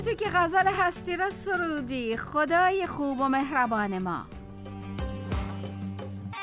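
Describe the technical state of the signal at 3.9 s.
At 3.9 s the signal is intact, with no dropout, glitch or distortion, just the narrow telephone-band sound of the WebRTC call path, which carries nothing above about 4 kHz.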